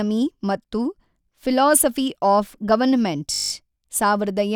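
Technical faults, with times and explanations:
3.34–3.52 s, system hang loop: right after "ಫೀಲೋಸಫ಼ಿ ಆಫ್ ಗವರ್ಮೆಂಟ್", the output stalls and a single 20 ms slice of speech repeats exactly nine times as the hardware recycles its ring buffer, producing a steady 50 Hz buzz, with essentially no audio lost.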